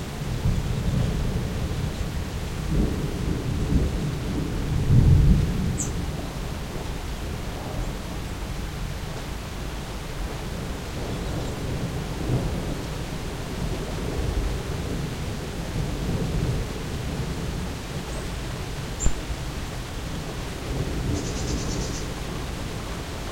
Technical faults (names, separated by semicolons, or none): crude rate conversion